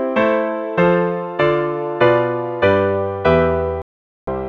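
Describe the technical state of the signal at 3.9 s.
At 3.9 s you're right inside a digital broadcast dropout, which runs from about 3.82 to 4.28 s. The receiver stopped getting clean frames, either because the signal went or because frames kept failing their checksum, so it muted rather than play garbage. You hear the sound cut out or quickly fade and sit in silence for roughly 0.46 s before picking back up further along. Whatever was sent in that gap is simply gone, which fits a run of around nineteen lost frames.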